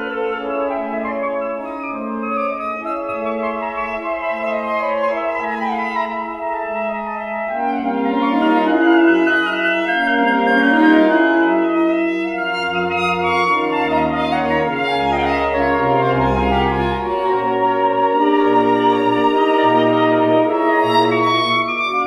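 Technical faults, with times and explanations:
No technical faults, with times and explanations, can be given, as none are heard.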